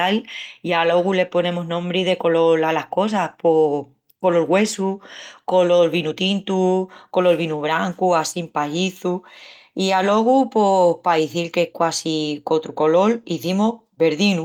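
No technical faults can be heard anywhere in the recording, and the speech signal stays continuous and steady throughout.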